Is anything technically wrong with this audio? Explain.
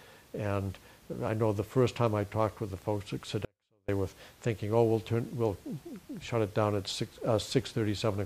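Yes. From 3.45 to 3.88 s there is an audio dropout to a faint residue. For about 430 ms the sound cuts abruptly to a faint leak, roughly 40 dB down. The likely cause is the signal being lost while the path stayed live.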